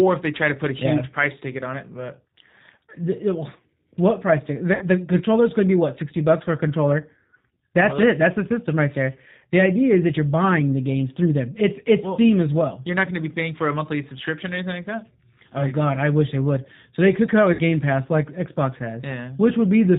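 The whole speech clip carries G.729 codec damage, and it is plainly audible. Nothing above 4 kHz survives. The speech is rebuilt from a vocal tract filter, a pitch predictor and a few pulses per frame, so it sounds rough and slightly synthetic. That character fits an 8 kbit/s G.729A coder.

At 4.75 s, after "the what price ticket", VoIP packet loss concealed by the speech codec begins. It runs to 4.84 s, just before "the controller's going to". The decoder stretches its last pitch and filter into a buzzy tone or coloured noise that fades, because each frame's gain drops. About 60 ms of audio is missing, which fits two lost packets. The recovery is not instant, since each frame builds on the previous one.

At 17.53 s, after "they could come out", the same concealment returns and lasts until 17.62 s. Again about 60 ms is lost. The sound smears into a fading buzzy tone or coloured noise, and the speech stays weak briefly after the packets resume.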